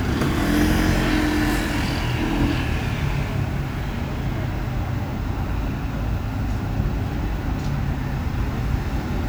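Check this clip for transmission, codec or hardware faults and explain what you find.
No faults turn up anywhere in the clip.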